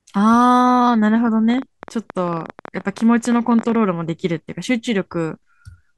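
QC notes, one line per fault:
1.50–3.76 s, train of clicks: about 30 uneven pops, 13.8 per second, peaking roughly 5 dB above the speech. Likely interference or a faulty connection or power supply. Thin vertical lines on a spectrogram, sharp spikes on the waveform.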